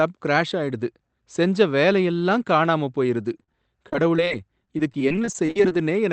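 A speech recording carried over a call codec whose audio stops near 8 kHz, consistent with a wideband Opus call at about 24 kbps. At 3.43 to 3.49 s there is a brief smear, and a second, much shorter one follows at 3.53 s. This is short concealed packet loss, where roughly 40 ms and then 10 ms of audio arrived too late and were filled by extending the preceding sound. From 3.89 to 5.77 s the speech turns choppy with bits missing. That is repeated packet loss (robotic sound), where frequent gaps of up to 43 ms were each patched by continuing the last sound, so about 15% of that stretch is synthetic fill.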